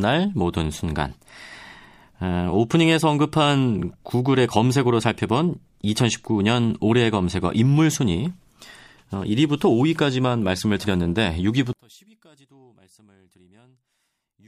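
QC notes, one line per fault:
11.73–14.47 s, one channel inverted, likely: the speech collapses by about 33 dB when the channels are folded to mono, so the centred voice nearly disappears. Flip one side's polarity and everything shared between left and right cancels, leaving just a faint residue of whatever differs.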